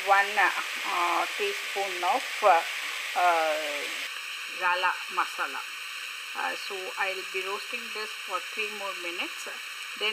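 From 4.07 s to the end, the sound turns hollow and phasey with channel delay (comb filtering): one channel lags the other by about 0.7 ms, and summing them cancels shared content at evenly spaced frequencies, the first notch near 700 Hz.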